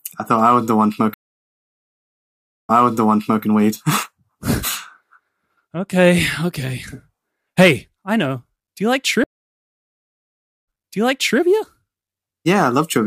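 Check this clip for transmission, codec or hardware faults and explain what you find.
Two stream reconnects break the speech. At 1.14 to 3.43 s, sound stops for 1.55 s. At 9.24 to 11.40 s, it stops for 1.44 s. Each time the connection dropped and a fresh decoder started mid-stream. The server resent buffered audio, so speech resumes about 0.74 s and 0.72 s earlier, repeating what was just heard.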